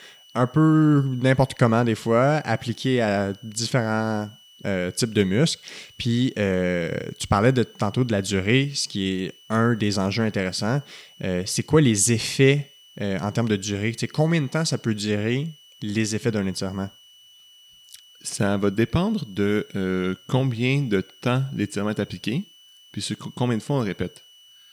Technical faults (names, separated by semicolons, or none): switching supply whistle